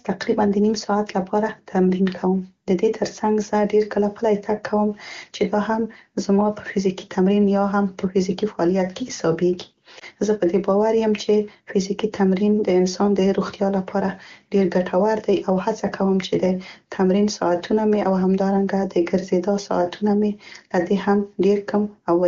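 At about 9.99 to 10.04 s there is a lost AMR speech frame. A burst of radio errors corrupted the frame, so the decoder repeated the previous pitch and vocal tract settings at reduced gain for the 20 ms gap. It sounds like a brief dip or warble, consistent with a single missing frame. The waveform shows a short amplitude sag, and the spectrogram shows a thin vertical band where the harmonics briefly smear and soften.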